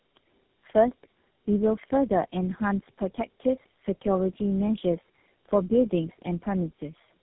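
Throughout the speech, tandem speech coding is audible. The sound points to roughly four speech codecs in series, each re-encoding the previous one's decoded output. The errors compound, leaving speech rough, muffled and warbly, with nothing above 3.8 kHz.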